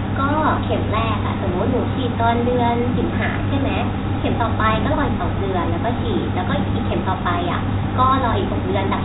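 No technical faults turn up anywhere in this speech; it carries the narrow, telephone-like character of G.711 coding, with nothing above 4 kHz and only a faint hiss that rises and falls with the speech level.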